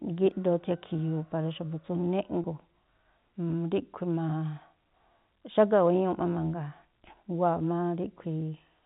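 A single stretch of packet loss with pitch repetition interrupts this speech recording at 2.42 to 2.44 s. About 20 ms of audio, consistent with one dropped packet, was never received, and the decoder filled the gap by repeating the last pitch period. The result is a brief held, slightly buzzy instant before the speech resumes. The underlying G.711 telephone coding keeps everything below 4 kHz, with at most a faint level-tracking grain.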